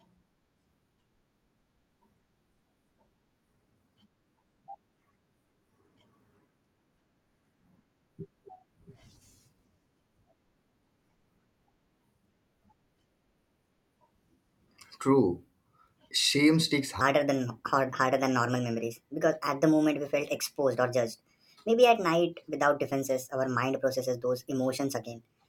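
From 17.01 s through to the end, the speech jumps into a section at the wrong speed, running about 1.31 times too fast and roughly five semitones high, so it turns hurried and chipmunky. That's likely playback or editing against a mismatched clock.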